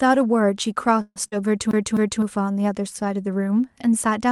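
A call audio freeze runs from 1.01 to 1.18 s. The speech stops advancing and its last sound is drawn out as a fading buzz or hiss for about 144 ms, including roughly 30 ms of near silence. This is likely late packets draining the jitter buffer. Nothing is lost, but everything after it arrives 144 ms later.

Short concealed packet loss follows at 1.28 to 1.34 s. About 40 ms of the call never reached the decoder in time, and the receiver covered the hole by extending the preceding sound before blending back into the real signal. It is heard as a brief smear.

CD stuck on one turn begins at 1.71 s and lasts until 2.22 s. A skip sends playback back over the same 0.26 s of speech, which plays twice in a row with a short mute at each jump. The result is the quick, even stutter of a scratched disc.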